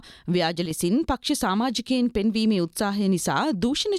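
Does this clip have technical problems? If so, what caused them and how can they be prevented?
Yes. One channel drops out from 0.66 to 0.71 s. One stereo side was likely lost for that instant, so the summed sound abruptly sinks about 6 dB for 50 ms. Secure the cables and connectors on both channels, and meter each side separately while recording to catch any dropout.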